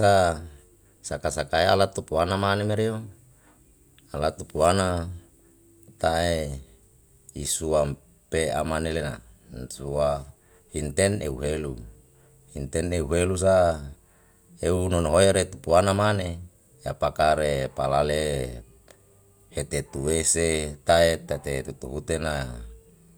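No technical faults occur at any point in the recording, so there is nothing to describe in time order.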